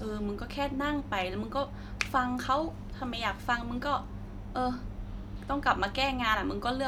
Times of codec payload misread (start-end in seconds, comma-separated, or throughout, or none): none